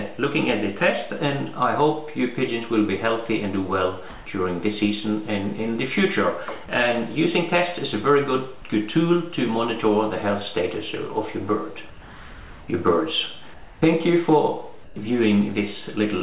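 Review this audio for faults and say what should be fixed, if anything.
The sender likely switched to discontinuous transmission during pauses, so the receiver substituted comfort noise in place of the background at 4.10–4.26, 11.90–12.68, 13.54–13.82 and 14.84–14.96 s. Each time, the real background, about 19 to 20 dB below the loud passages, becomes a flat, featureless hiss that shifts in level by about 3 dB at first and about 1 to 2 dB later. To prevent it, disable DTX/VAD on the sending side.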